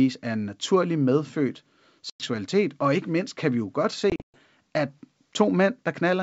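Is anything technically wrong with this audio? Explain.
Yes, there are two dropouts from packet loss on an ADPCM call. The first runs from 2.10 to 2.28 s, right after "er en naturlig medfødt" and before "og ikke mindst kan", with about 100 ms of audio gone. The second, after "kan vi jo godt", spans 4.10 to 4.39 s, where 180 ms goes missing in patches scattered over 240 ms, the longest gap being 120 ms. Each hole cuts in hard to silence. Because the receiving decoder's predictor and step size no longer track the sender's, the speech comes back with a bit of distortion before settling. The wideband G.722 coding underneath sounds clean, reaching well up toward 7 kHz.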